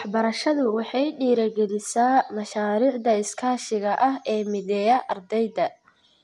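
No technical faults are audible.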